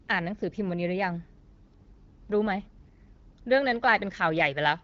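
Nothing here is wrong technically: it's a speech clip carried over the AMR wideband (HD Voice) codec at a rate that fits 12.65 kbit/s, so it's band-limited with nothing above about 7.5 kHz, exactly as that path is meant to sound.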